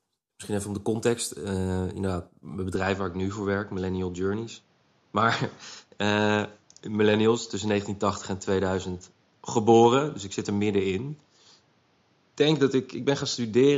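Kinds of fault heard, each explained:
Input switched to a poorer device: The recording path likely changed microphones partway through, moving from the original input to one that passes a narrower band. From 2.76 s to the end, the speech loses everything above 7.2 kHz, so it turns duller and less airy. There is no gap at the switch and the loudness stays about the same, but a faint new background noise appears far below the speech.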